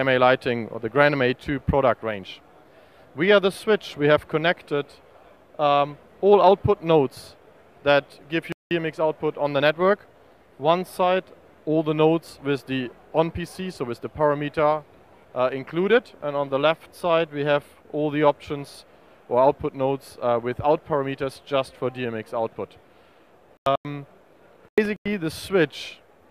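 At 8.52 to 8.71 s there's a corrupt frame muted dropout: the decoder rejected damaged compressed frames, leaving an abrupt hole about two frames long. The same muting returns at 23.57 to 23.85 s and at 24.69 to 25.13 s, with the later holes fitting three and then five frames. Between those, at 20.76 to 20.79 s, a corrupt FLAC frame sends the prediction off on bad values from the damaged bit on, producing a click, offset or noise burst peaking around -33 dBFS.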